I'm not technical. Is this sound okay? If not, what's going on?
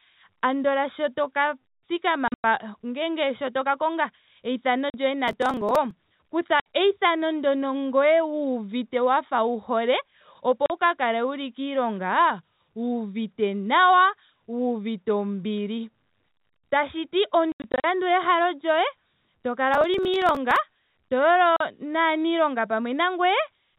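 No. Two things go wrong.

First, packet loss filled with silence. Bits of speech drop out and are replaced by short holes. This happens at 2.28, 4.9, 6.6, 10.66, 17.52 and 21.56 seconds. The holes come in steps of about 20 ms, which fits lost 20 ms packets. The worst stretches are near 2.3 and 17.5 seconds.

Second, processor overload crackle. From 5.28 to 5.91 seconds and from 19.74 to 20.56 seconds, the sound turns gritty and crackly. The computer was too busy and skipped about twenty tiny pieces of sound each time.

The narrow, phone-line sound comes from ordinary telephone coding, which keeps nothing above 4 kHz.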